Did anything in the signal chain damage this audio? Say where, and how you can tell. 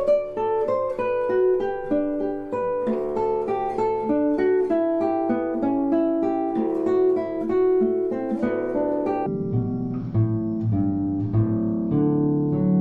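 Yes. From 9.26 s to the end of the clip, the audio plays at half speed and exactly an octave low, which points to stereo read as mono at the sample-format conversion or driver stage. Interleaved left and right samples were taken in sequence as one channel, doubling the sample count. A mismatched sample rate could also slow the sound, but the fainter mirrored copy in the upper half of the spectrum identifies this fault.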